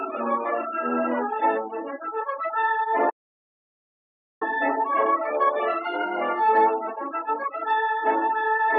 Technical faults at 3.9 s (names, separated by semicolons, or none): audio dropout to silence